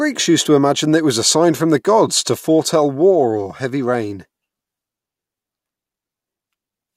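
Nothing stood out as a technical fault on listening to this speech recording.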